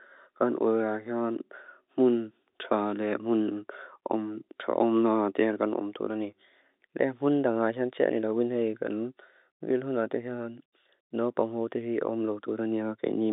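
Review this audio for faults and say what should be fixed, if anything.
Nothing needs to be fixed in this audio, as no faults turned up on review.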